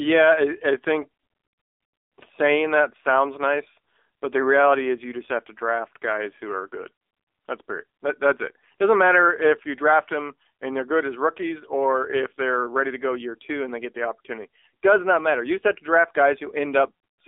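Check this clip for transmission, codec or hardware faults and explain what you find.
One fault runs through the whole clip: the speech has passed through the AMR narrowband mobile codec. The voice sounds thin, boxed-in and audibly synthetic, with a buzzy edge. The low end disappears below about 300 Hz and nothing comes through above 3.6 kHz. AMR-NB rebuilds speech from a vocal-tract model fed by a handful of pulses every 5 ms. At a low rate, which fits 7.4 kbps, that coarse excitation produces the plainly audible buzz.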